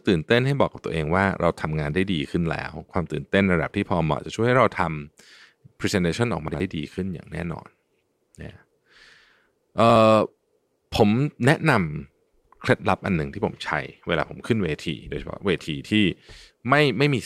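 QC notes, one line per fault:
6.48–6.60 s and 9.84–9.96 s: chunks out of order. In each 120 ms span, two 60 ms chunks play swapped, the later one first, so the sound briefly jumbles with three abrupt joins, though nothing is lost.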